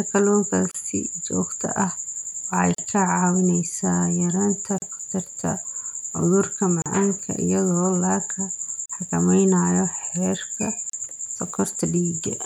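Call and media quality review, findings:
Gap at a join of encoded pieces: separately encoded segments concatenated untrimmed, encoder delay and padding left in. Speech drops out for 32 to 38 ms at 0.71, 2.75, 4.78, 6.82, 8.86 and 10.90 s.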